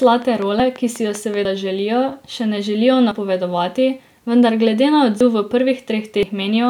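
From 0.03 to 1.35 s, just before "želijo še ne želijo", a train of clicks runs at a regular 5.2 per second, about seven similar ticks peaking roughly 5 dB above the signal, likely from interference or a faulty connection.

Dropped buffers (overruns) at 0.60, 1.45, 3.12, 5.21 and 6.23 s are each heard as a forward jump with no gap. The audio was likely overwritten before it was read: about 40 ms lost at the first three (the 3.12 s one just after "želijo še ne želijo"), about 100 ms at 5.21 s and about 150 ms at 6.23 s.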